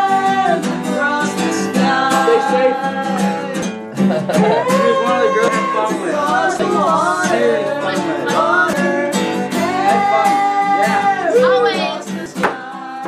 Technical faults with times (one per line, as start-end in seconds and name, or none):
3.62 dropped buffer (overrun)
5.48 dropped buffer (overrun)
6.59 dropped buffer (overrun)
8.73 dropped buffer (overrun)
12.26 dropped buffer (overrun)